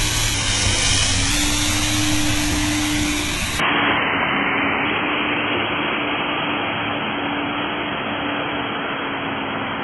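From the start, the everyday sound has a gritty, metallic treble that stops dead at 11.8 kHz, likely heavy HE-AAC compression around 16 kbps. A spectrogram shows a hard ceiling with smeared, copied-looking upper bands.

At 3.59 s the sound turns dull and boxy with no gap, likely an input switched to a poorer device. The spectrogram is cut off above 3.3 kHz, the waveform's level shifts by a few decibels, and a faint new noise floor appears.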